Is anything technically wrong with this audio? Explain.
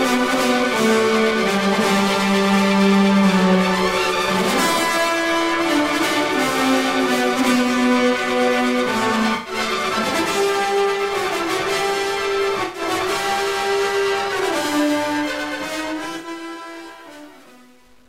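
Yes, there are two faults. Periodic clock jitter runs through the whole clip. A steady disturbance wobbles the converter's sampling clock at around 1 kHz, which puts sidebands roughly 1 kHz above and below every component, strongest on the high-frequency content. The result is a metallic roughness that tracks the sound and disappears in the pauses. That dependence on the signal separates it from a fixed hum or whine, which would persist through silence.

AAC frame loss with concealment occurs three times: from 9.35 to 9.53 s, from 12.63 to 12.82 s, and from 16.18 to 16.27 s. In each gap the decoder lacked coded data and rebuilt the sound from the last good spectrum. The first two gaps last about 0.1 s, which fits roughly five consecutive AAC frames, and the third fits about three. Each is heard as a brief smeared, phasey patch, not a hard dropout. Unlike a digital click or a gap of true silence, the sound blurs and holds its rough shape before normal detail returns.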